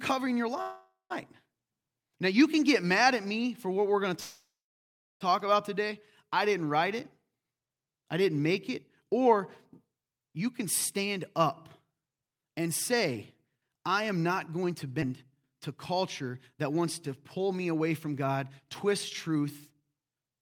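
Speech, with three kinds of fault. At 0.61 to 1.12 s the sound stalls into a fading buzz that ends in about 0.17 s of silence. From 4.20 to 5.23 s, between "what we're going to" and "talk about today I", the same happens for about 1 s, with 0.72 s of silence. Nothing is lost. The speech resumes where it stopped. This is likely a call audio freeze, where delayed packets emptied the jitter buffer. From 11.85 to 20.38 s the speech runs at 108% speed with unchanged pitch and sounds hurried. This is jitter buffer speed-up. The receiver repeatedly cut short pitch-period pieces, roughly 0.7 s in total, to shrink an overfull buffer. At 15.01 s there is a skip ahead. Roughly 0.2 s of speech is dropped, and the two sides are joined almost directly.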